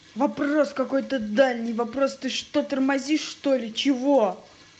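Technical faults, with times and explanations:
No technical faults are audible in this speech recording, which has passed through a WebRTC call path whose top end stops at about 8 kHz.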